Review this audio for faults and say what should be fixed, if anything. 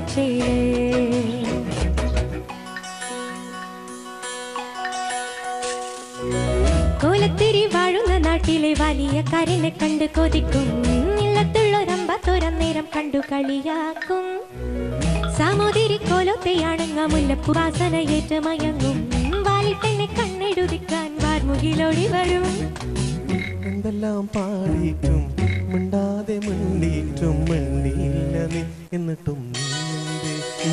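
At 17.52 s there's a compressed frames skipped fault. A few frames, something like 70 ms' worth, never got decoded, so the audio jumps ahead. Worth re-encoding from a clean source and checking file integrity before delivery.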